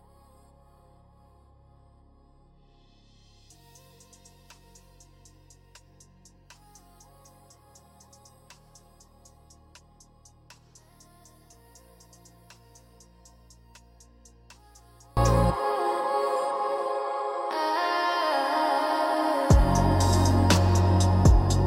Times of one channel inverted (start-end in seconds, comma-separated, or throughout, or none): 0.00-15.17